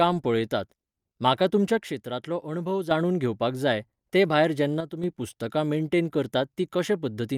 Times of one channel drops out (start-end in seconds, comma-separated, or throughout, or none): 1.78-2.91, 4.81-5.04